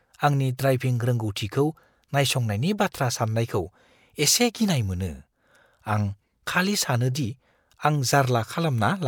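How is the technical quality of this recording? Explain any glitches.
No technical faults are audible.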